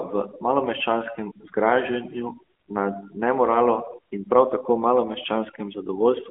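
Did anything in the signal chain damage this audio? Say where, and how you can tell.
Yes. Overdone noise removal at the call-processing stage runs throughout: bands near the noise estimate are cut, leaving near-silent gaps with twinkling specks.

The AMR narrowband mobile codec also acts throughout: nothing above 3.7 kHz, a 250 Hz to 3.4 kHz line band, and plainly audible buzzy coding that fits a 10.2 kbps mode.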